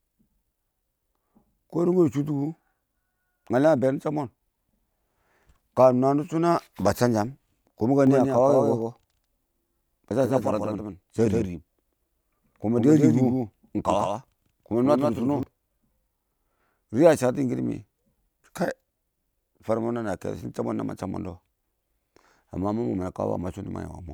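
Speech runs clean until 8.07 s, when a second full-band copy of the same audio abruptly cuts in about 150 ms behind the original and around 5 dB quieter, with no decay or room colour, giving a doubled audio track that stops just as suddenly at 15.43 s. The likely cause is the signal being captured twice, once through a slower path, or an edit leaving two copies out of step.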